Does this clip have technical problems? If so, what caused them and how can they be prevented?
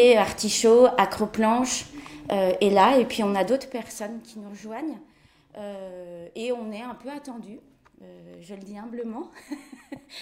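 No, no technical problems heard.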